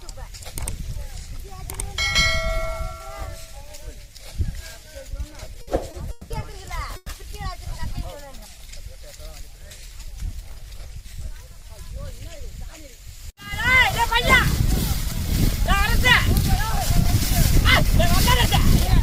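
From 5.47 to 6.33 s, repeated stalls (stutter): five short gaps, longest 190 ms, are bridged by stretched sound, so the audio drags unevenly instead of stopping once.

At 6.96 s, a call audio freeze: one 110 ms hold of the last sound fading briefly to silence, likely from delayed packets, then resuming with nothing lost.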